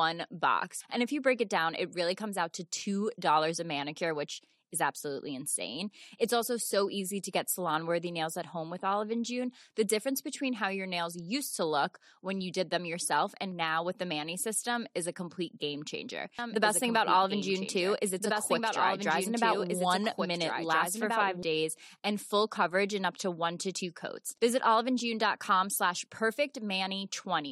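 Speech, with a doubled audio track from 16.39 to 21.43 s, between "a complete game changer" and "days and full coverage". A dry, full-band second copy trails about a second and a half behind, around 5 dB quieter, cutting in and out abruptly, likely from a slower capture path recording the same audio twice.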